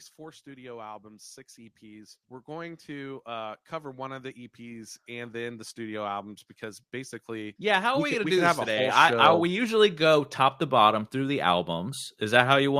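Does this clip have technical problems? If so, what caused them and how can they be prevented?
Yes. From 0.16 s to 11.99 s the level climbs steadily by about 23 dB. This is automatic gain rising: the automatic gain control judged the input too quiet and kept raising its gain across nearly the whole clip. What separates it from a speaker simply moving closer to the microphone is that the background noise swells right along with the speech, because the gain is applied to everything the microphone picks up. To prevent it, disable automatic gain control and set a fixed input level before recording.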